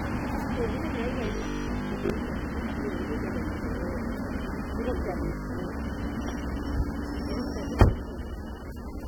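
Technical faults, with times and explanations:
throughout: AAC compression. Coding damage is plainly audible across the whole clip as a smeared, fizzy texture. On a spectrogram the content stops at a sharp horizontal ceiling near 19.3 kHz, with nothing above it. The likely cause is AAC-LC encoding at a bitrate around 32 kbps, which is too low for this material. The encoder quantises each block's frequency lines coarsely, and the resulting quantisation noise is heard as audible grit.
1.26 to 2.10 s and 5.26 to 5.58 s: robotic sound from repeated short buffers. In both stretches the sound collapses into a rigid metallic buzz at 50 Hz. The likely cause is playback starving for data and looping the last 20 ms chunk, so most of the real audio in those spans is skipped. The waveform shows one identical 20 ms shape stamped out again and again. The spectrogram shows evenly spaced harmonic lines 50 Hz apart.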